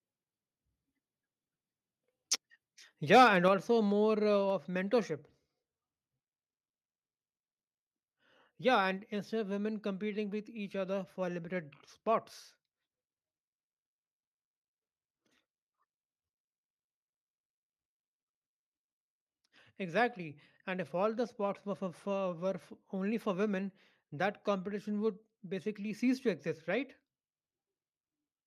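A speech recording in which the level drops abruptly by about 5 dB at 3.48 s, just before "also more uh". The voice and the background fall together in a single step, which marks it as a microphone volume stepped down. The likely cause is call software that judged the input too hot and lowered the device's input volume. Unlike an automatic gain control or compressor, which ride the level smoothly, this is one instant step that never recovers.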